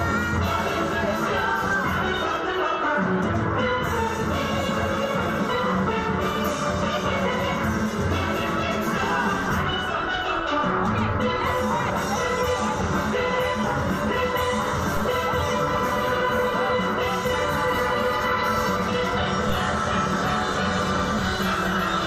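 A low thump sounds at 14.97 s and again at 19.49 s. Each is a DC step: the waveform's zero line jumps by about -19 dBFS, then relaxes back as a 5 Hz high-pass drains the offset.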